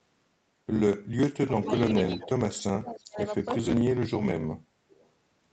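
From 1.37 to 1.71 s the speech dips by about 30 dB for roughly a third of a second. This is speech suppressed in double talk, likely an echo canceller that could not tell the near talker from loudspeaker echo while both sides spoke, so it attenuated everything. At 1.61 to 1.68 s an echo leak appears: a faint copy of the speech, about 15 dB down, trailing the original by 310 ms, which points to residual loudspeaker pickup that the canceller did not remove. The pattern repeats. From 1.89 to 2.41 s there is another suppression of about 30 dB. Inside it, from 1.93 to 2.28 s, the 310 ms echo returns at about 15 dB below the speech. From 2.51 to 2.63 s there is a shorter echo scrap, about 20 dB down. From 2.69 to 3.32 s comes the deepest cut, about 35 dB, over roughly half a second. At 3.80 to 3.88 s there is a brief dip of about 30 dB. From 4.89 to 5.08 s a last echo tail sits about 35 dB down. 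Throughout, the audio stops at 8 kHz, consistent with the call codec's bandwidth.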